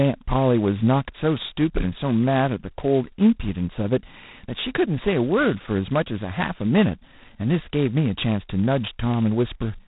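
From start to finish the speech carries a harsh, rasping hiss that rises and falls with its level, and nothing above 3.8 kHz survives. This is heavy G.726 ADPCM damage: too few bits per sample, which fits 16 kbit/s, leave the prediction difference coarsely quantized.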